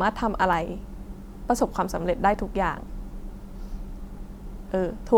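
No technical faults can be heard anywhere in this speech recording.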